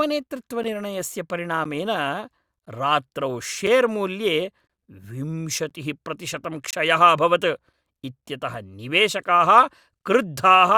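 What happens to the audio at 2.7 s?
At 2.65 s there is a gap between stream segments: the timestamps of two consecutive segments leave about 13 ms uncovered, and the player fills it with silence. The speech drops into a hard-edged hole, but unlike a dropout nothing is lost; the audio just resumes slightly later.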